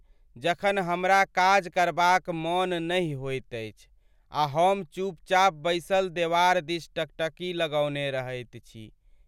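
A speech recording with no technical faults to report. Nothing in it needs a time or a cause.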